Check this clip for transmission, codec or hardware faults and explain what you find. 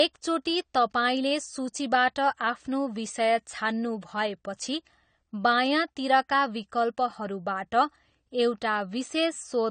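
One fault is present, lasting the whole recording: AAC compression, at a plainly audible level.

Throughout, the speech stops at 9 kHz and sounds dull and smeared, with a fizzy warble on sibilants. This likely comes from AAC-LC coding at a bitrate around 32 kbps, which drops the top band and coarsely quantises what remains. A plain low-pass filter would dull the sound without that warble.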